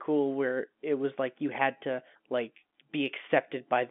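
No faults to report in this speech; the band sits within a telephone line's 200 Hz to 3.5 kHz, consistent with ordinary G.711 mu-law coding at 64 kbps, and nothing in the signal path breaks down.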